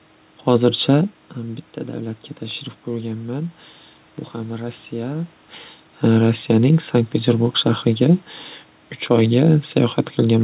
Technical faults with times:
none

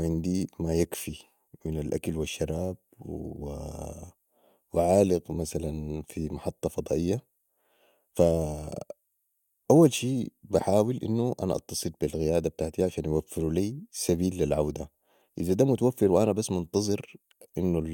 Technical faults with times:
none

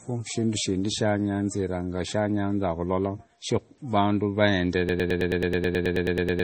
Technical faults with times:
0.00-6.43 MP3 compression
4.89-6.43 broken-record loop

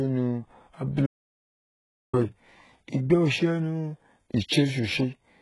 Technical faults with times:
0.00-5.41 HE-AAC compression
1.06-2.13 audio dropout to silence

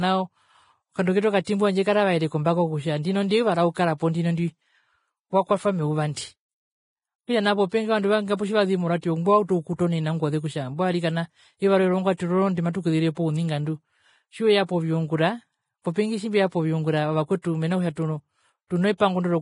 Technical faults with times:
0.00-19.41 Vorbis compression
1.44-1.47 pre-echo
17.42-17.44 pre-echo

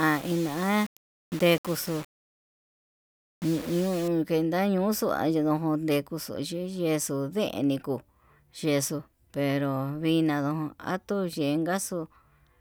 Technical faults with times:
0.00-4.08 low bit depth without dither

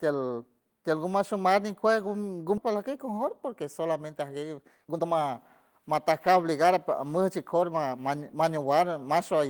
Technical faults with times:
2.57-2.59 skip ahead
4.05-5.31 jitter buffer speed-up
5.71-8.58 jitter buffer speed-up

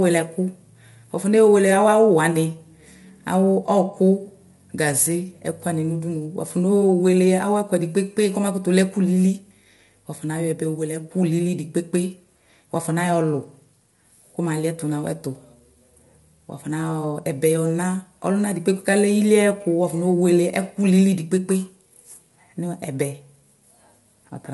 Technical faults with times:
0.00-24.53 low-delay AAC compression

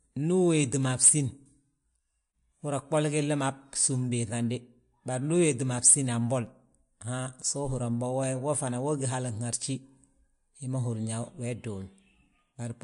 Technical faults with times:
0.00-12.83 MP3 compression

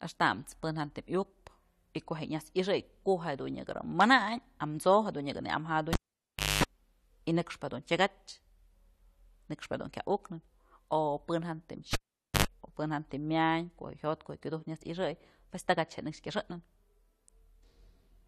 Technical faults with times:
5.93-6.64 cable pulled and plugged in
11.93-12.45 cable pulled and plugged in

